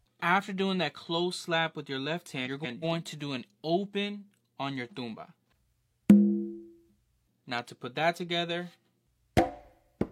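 From 2.45 to 2.84 s, frames out of order: two adjacent blocks of about 186 ms each, which fits runs of four frames, were decoded in swapped sequence, so the later half plays before the earlier one. The sound flutters and garbles briefly. Unlike a dropout or a stutter, nothing goes missing and nothing repeats, and the timing afterwards stays intact.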